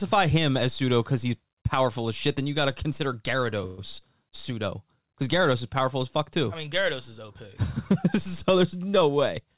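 At 3.66 s, just after "you got to consider", the sound stops advancing for about 0.14 s and the receiver fills the hole with a smeared continuation of the last sound, a short buzz or hiss that fades rather than silence. This is a call audio freeze, likely caused by packets stalling in transit so the jitter buffer ran dry. When audio resumes at 3.80 s with "pseudo because", it picks up exactly where it left off. Nothing is lost, but everything after is pushed about 119 ms later.

From 9.02 s to 9.40 s a jitter buffer speed-up occurs. The receiver had built up more delay than its target and trimmed it by cutting out short pitch-period-sized slices in quick succession, roughly 40 ms in total. Playback over that stretch runs about 7% fast at unchanged pitch, giving the ending a slightly rushed feel. Throughout, the call path's band limit is audible, with nothing above 4 kHz, which fits G.711 mu-law at 64 kbps.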